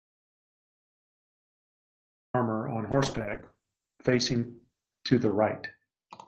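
The input signal was most likely lost before the clip began, and silence was written in its place. This audio dropout to silence is already under way at the start and lasts until 2.34 s: dead, total silence with no room tone, then the speech cuts in abruptly.

From 2.92 s to the end, a call bitrate drop forces the encoder from 64 kbps down to 8 kbps, holding the lowest rate for about 2.4 s. Bandwidth shrinks from 20 kHz to 8 kHz, so the speech turns muffled, rough and watery.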